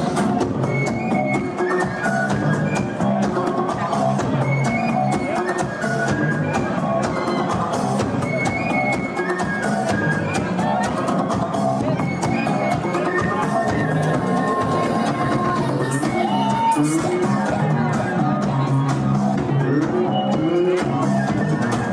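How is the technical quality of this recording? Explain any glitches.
The recording has two kinds of decoding glitch, both brief: three short skips and one burst of corruption.

Compressed frames skipped, at 3.00–3.03 s, 11.77–11.81 s and 19.34–19.38 s. Whole frames of the encoded stream never reach the output, so the audio lurches forward, by around 20 ms at the first and last points and around 50 ms at the middle one.

Corrupt frame decoded, at 4.24–4.26 s. Damaged bits in a couple of frames were decoded anyway, so misread gains and codes throw energy into the wrong frequency regions for roughly the length of those frames. The result is a short glitch peaking at about -15 dBFS.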